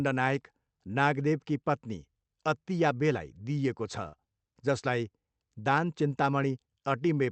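This is a speech clip with one short concealed packet loss at 4.08 to 4.26 s. About 40 ms of audio never made it to the decoder in time, so the receiver patched roughly 44 ms by carrying the last stretch of sound forward and easing back into the real signal. You hear a quick smear or wobble there, with a small bit of added delay, around 10 ms. It's all coming through a call path whose top end stops near 8 kHz, which fits Opus at a modest bitrate.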